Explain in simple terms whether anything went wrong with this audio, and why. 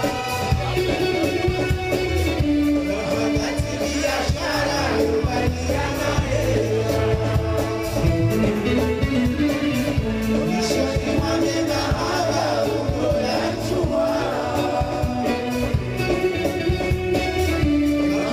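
A faint gritty fizz rides on the louder and brighter moments from start to finish. This is crude rate conversion: samples were simply dropped, likely converting 48 kHz to 44.1 kHz without filtering.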